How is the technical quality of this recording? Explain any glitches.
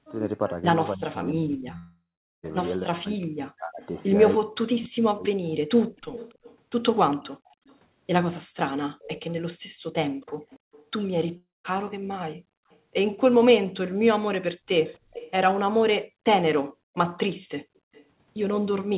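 The recording has clear call-path faults: speech suppression, two network dropouts, repeated echo and gated background. The sound is band-limited to 4 kHz, which fits narrowband G.711 telephony.

Speech suppressed in double talk, 0.95 to 5.46 s: the echo canceller likely mistook overlapping talk for echo. For roughly three seconds, speech dips by up to about 40 dB.

Long network dropout, 1.78 to 2.45 s and 11.37 to 11.66 s: packets likely stopped arriving. A fading fill gives way to silence, and about 660 ms and 280 ms are lost.

Echo leak at 4.84 to 7.76 s, 9.00 to 10.85 s, 12.70 to 12.79 s, 14.85 to 16.07 s and 17.77 to 18.05 s: loudspeaker sound likely slipped past cancellation. A copy arrives 282 ms late, about 15 to 35 dB below the speech.

Background gated by the echo canceller, 9.60 to 10.46 s and 16.64 to 16.95 s: the canceller clamped the microphone during playback. The room sound briefly drops by about 40 dB.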